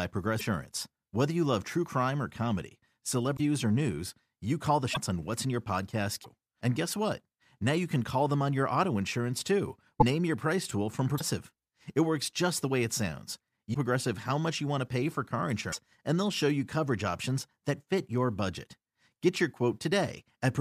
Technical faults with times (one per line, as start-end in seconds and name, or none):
0.38-0.41 broken MP3 bit reservoir
3.36-3.40 broken MP3 bit reservoir
4.93-4.97 broken MP3 bit reservoir
6.23-6.26 broken MP3 bit reservoir
9.99-10.03 broken MP3 bit reservoir
11.17-11.21 broken MP3 bit reservoir
13.73-13.75 broken MP3 bit reservoir
15.71-15.74 broken MP3 bit reservoir